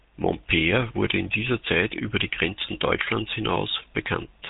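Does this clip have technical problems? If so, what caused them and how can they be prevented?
Yes. The whole speech clip went through the GSM full-rate codec, which fits 13 kbps. Its pulse-driven vocal-tract model leaves plainly audible buzzy roughness, with nothing above 3.8 kHz. Prevent it by recording locally or using a wideband codec instead of a GSM call path.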